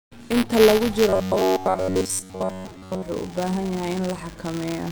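A speech clip with buffer tearing running through its whole length: a steady rattle at 200 Hz, present only while sound is playing. The writer and reader of the ring buffer have drifted, so a small slice of each 5 ms period, a couple of percent, holds audio from roughly 10 ms earlier, with hard joins on both sides. From 1.09 to 3.02 s the voice turns rigid and metallic, buzzing at 93.8 Hz while still loosely tracking the speech. This is robotic sound from repeated short buffers, likely caused by audio arriving too seldom, so a segment of about 10.7 ms is replayed and most of the real signal is skipped.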